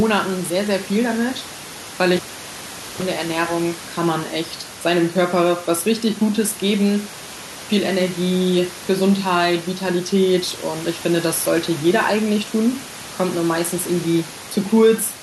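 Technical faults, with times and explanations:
2.17–3.02 s, cable pulled and plugged in: a pop marks the moment the live lead is withdrawn, after which the signal drops to near silence for about 0.81 s, taking with it the room noise, which otherwise sits about 18 dB below the speech. On reinsertion, roughly 31 ms of 50 Hz mains buzz appears while only the plug tip makes contact and the shield is still open, followed by a second pop as the full connection restores the speech.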